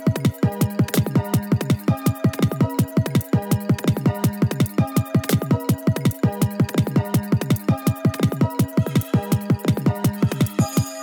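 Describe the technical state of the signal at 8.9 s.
At 8.9 s the wrong sample rate fault is present, as it is across the whole clip. Everything runs about 2.76 times too fast and about 17.6 semitones high, which fits 16 kHz material played at 44.1 kHz. Unlike a pitch shift or time-stretch, speed and pitch rise together in a fixed ratio.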